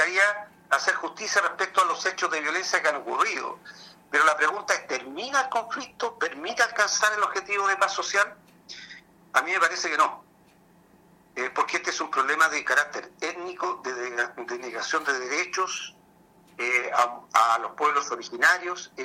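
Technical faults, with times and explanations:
No technical faults can be heard in this clip.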